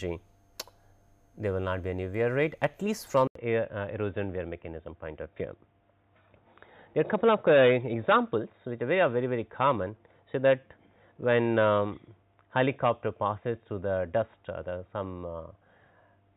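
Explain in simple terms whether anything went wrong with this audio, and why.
At 3.27 s there is a short gap. Then the sound turns dull and boxy, with nothing above 3.8 kHz. The likely cause is an input switched to a poorer device.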